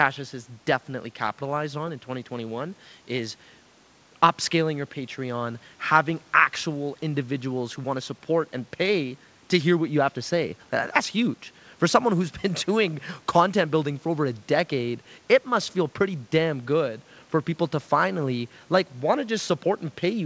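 There are no technical faults to describe at any point in this speech, which comes through a call path whose wideband codec leaves nothing above 8 kHz.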